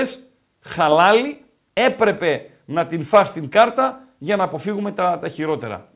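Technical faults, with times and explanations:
No technical faults heard.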